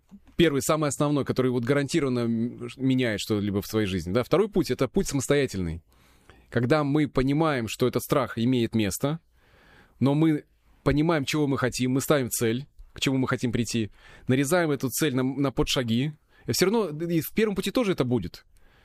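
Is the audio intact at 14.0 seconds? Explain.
No. At 14.0 seconds, as throughout the clip, the speech carries a block size mismatch (truncated). Each block's tail is discarded, giving a 46.9 Hz buzz that fits 1024-sample blocks, with speed unchanged at 1.0x. Unlike mains hum, this buzz sits at the block rate rather than 50 or 60 Hz.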